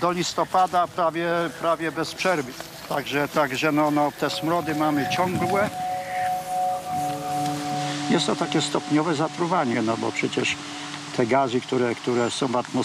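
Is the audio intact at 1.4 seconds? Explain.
Yes, the audio at 1.4 seconds is intact, with no dropout, click, distortion or other fault at that moment.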